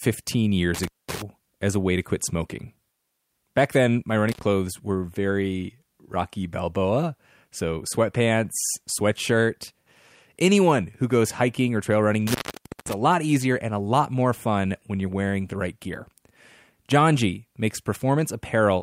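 Intermittent contact drops the speech out three times, at 0.75–1.22 s before "as a way to", at 4.29–4.43 s between "then my" and "were very", and at 12.27–12.93 s after "hiking or trail running". A loose connection opens for 213, 88 and 520 ms, leaving faint hiss between crackling edges.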